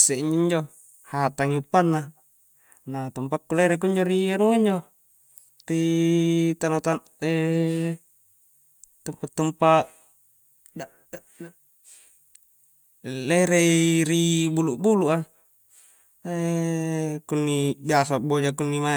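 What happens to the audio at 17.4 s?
At 17.4 s the speech carries on intact, with no dropout, click, distortion or other fault at that moment.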